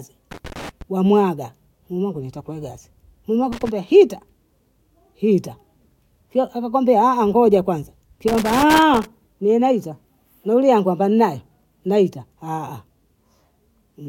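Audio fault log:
0.31–0.82 s, 3.52–3.69 s, 8.28–9.05 s: loose connector crackle. A worn contact keeps making and breaking, chopping the speech into short irregular bursts of scratchy crackle.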